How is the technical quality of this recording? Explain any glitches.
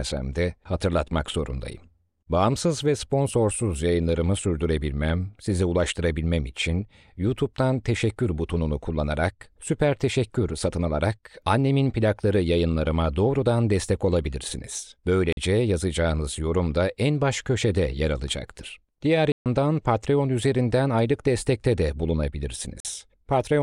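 The speech recording has three blocks of digital silence. At 15.33 s, between "yayınlarıma doğrudan destek olabilirsiniz" and "yazacağınız yorum da en", and again at 22.80 s, the signal drops to zero for 46 ms, which fits one missed 2048-sample buffer. At 19.32 s the hole lasts 139 ms, consistent with three consecutive buffers. The audio switches off and on with no fade, so each gap is a short hole.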